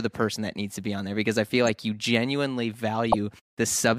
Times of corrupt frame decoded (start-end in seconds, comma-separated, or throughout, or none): 1.66-1.69, 3.04-3.15